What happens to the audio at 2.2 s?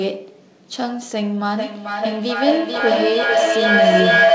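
At 2.2 s the sound is caught in a feedback howl that starts at 1.57 s and runs to the end of the clip. Two devices on the same call share a room, and each pass from microphone to loudspeaker and back adds gain. The repeats, coming roughly every 0.4 s, narrow to a tone near 700 Hz that peaks about 7 dB above the speech. A spectrogram shows a bright horizontal band near 700 Hz, and the waveform swells.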